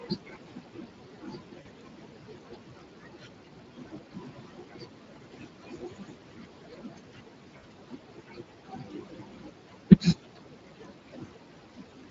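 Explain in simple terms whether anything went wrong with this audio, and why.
Yes, several things went wrong. Throughout the recording, the background noise dips between phrases and swells back under the talking. Those are noise suppressor artifacts: a filter keeps guessing which parts are steady background noise and turning them down moment by moment.

The voice also sounds hoarse and grainy from start to finish. That is the Speex codec, an older internet-calling speech format. At the setting used here it squeezes the voice hard enough for the damage to be plainly audible.

Across most of the clip, quiet consonants, word endings and softer stretches sound swallowed or oddly faint. This is speech cut by the noise suppressor. The same filter mistook parts of the voice for the room's background noise and turned them down along with it. That background noise is part of the original recording, sitting well below the speech.

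At about 1.61 to 1.67 s and again at about 7.57 to 7.65 s, the voice briefly smears into a stretched sound that fades out. Each is VoIP packet loss concealed by the speech codec. Small chunks of the audio went missing in transit, and the decoder filled each gap by extending the last sound it had.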